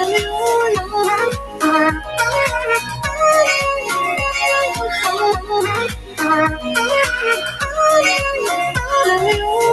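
What you've got here is non-speech audio run through a speech-tuned noise suppressor. It keeps mistaking sustained material and tails for noise, so the level pumps and thins by around 10 dB as held parts sink and attacks punch through. You can hear the sound cut by the noise suppressor in four spots: 1.31–1.63 s (down about 10 dB), 2.0–2.18 s (about 7 dB), 2.81–3.06 s (about 6 dB), and worst at 5.91–6.21 s (about 13 dB). The top end tops out around 12 kHz, which fits an Opus call path at roughly 40 kbps.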